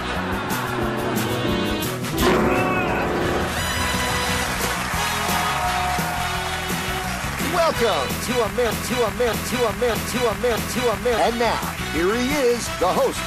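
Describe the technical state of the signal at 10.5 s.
At 10.5 s the signal sits inside a broken-record loop running from 8.70 to 11.18 s: a 0.62 s fragment repeats exactly, back to back, four times. This likely comes from a stalled player or stream re-sending its last buffered fragment, so the intervening audio is lost.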